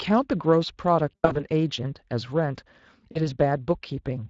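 Throughout, the speech carries the grain of the Speex codec: CELP coding with too few bits for the excitation leaves a hoarse, noisy texture on voiced sounds, at a quality that fits a rate near 20 kbps. Unlike the swirly, watery artefacts of transform codecs, the roughness sits in the voice itself.

From 1.12 to 1.45 s, VoIP packet loss concealed by the speech codec takes over. About 180 ms of audio is missing, scattered across roughly 240 ms, with the longest gap 80 ms. The decoder fills each hole by stretching its last pitch and filter into sound that fades. The voice stays weak for a moment after real audio returns.

A shorter concealment of 40 ms follows at 3.11 to 3.29 s. In both places the gaps are bridged by synthetic sound rather than silence or clicks, which sets concealment apart from plain dropouts.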